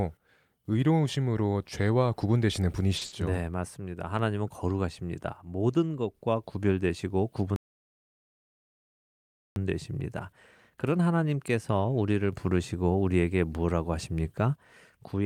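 At 2.97 s a packet arrived late and the jitter buffer ran dry, a short stall from a late packet. The receiver held the last speech sound for about 40 ms until the packet turned up, adding 40 ms of delay, so one sound drags briefly with a faint buzz or dip, though nothing is lost.

Straight after, from 3.05 to 3.13 s, a burst of packet loss took out 60 ms of speech. The receiver extended and faded the last sound across the gap, giving a brief held buzz or fading hiss, then the speech picks up further on with that stretch missing.

From 7.56 to 9.56 s there is a playback stall. The player most likely ran out of data or had its output thread blocked, and the speech cuts out mid-flow into two full seconds of silence before carrying on.

Between 10.70 and 11.07 s the jitter buffer speed-up kicks in. With more audio queued than needed, the receiver trimmed many tiny pitch-period slices, roughly 50 ms in total, so this stretch of speech plays at about 111% speed with unchanged pitch and sounds rushed.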